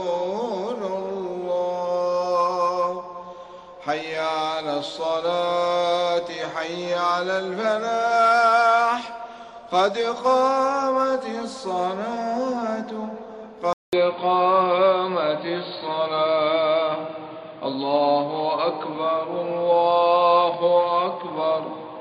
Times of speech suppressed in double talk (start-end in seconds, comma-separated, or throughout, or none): none